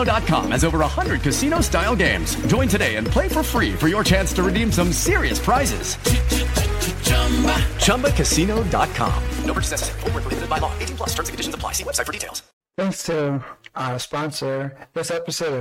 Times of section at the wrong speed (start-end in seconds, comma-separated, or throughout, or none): none